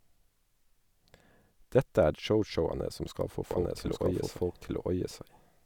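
Speech with a doubled audio track from 3.51 s, just after "som skal få", to the end: a second full-band copy runs about one second behind at roughly equal level, starting abruptly. Unlike an echo or reverb, it neither decays nor carries room colour, likely from a slower second capture path.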